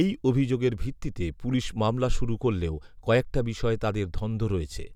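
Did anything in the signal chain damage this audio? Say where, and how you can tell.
No, nothing along the chain from capture to playback leaves an audible mark on this speech.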